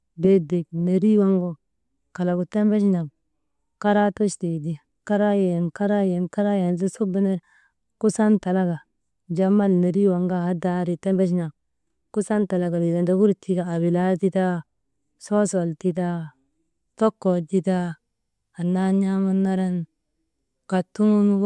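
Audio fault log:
No fault is heard in this speech clip.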